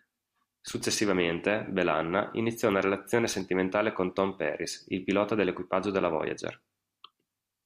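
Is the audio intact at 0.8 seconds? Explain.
No, loose connector crackle runs from 0.67 to 0.82 s: a dirty contact makes and breaks, chopping the speech into irregular scratchy bursts rather than one clean dropout.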